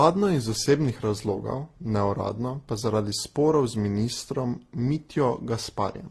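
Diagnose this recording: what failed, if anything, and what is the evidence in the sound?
Codec stage, likely transcoding between lossy codecs: throughout, nothing above 12.1 kHz, with several different kinds of artefact layered together, unlike a single encode. This fits repeated lossy passes ending in low-rate Opus.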